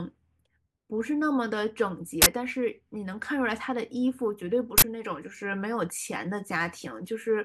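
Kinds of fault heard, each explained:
Uninitialised buffer: leftover memory played as samples, giving two loud bursts of digital noise, each lasting 43 ms and fitting a 2048-sample block, longer than a click.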